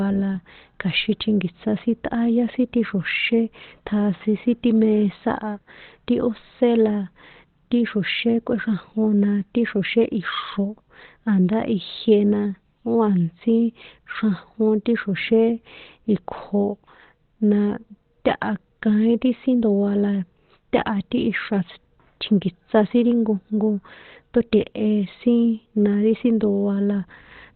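Right through the speech there's nothing above about 4.3 kHz, and it comes across muffled and hoarse, likely Opus compression dropping into its narrowband speech mode around 16 kbps.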